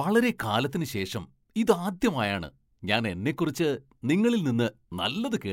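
No faults turn up anywhere in this recording; there's nothing here to flag.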